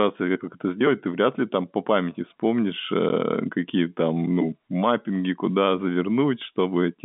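Packet loss filled with silence at 3.09 s: a short stretch of the speech goes missing and the receiver substitutes dead silence for it. The hole lasts about 10 ms, which fits the loss of a single packet, and the audio drops to nothing and returns abruptly, leaving hard edges. The gap sits within telephone-band sound, consistent with G.711 coding limited to roughly 200 Hz to 3.6 kHz.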